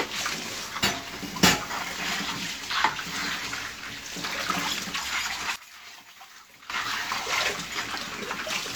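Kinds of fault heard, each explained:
One channel inverted: between 5.56 and 6.70 s the sound drops by about 18 dB, likely because one stereo channel's polarity is reversed, so content shared by both channels cancels in mono. The waveform shrinks abruptly there, and the spectrogram dims.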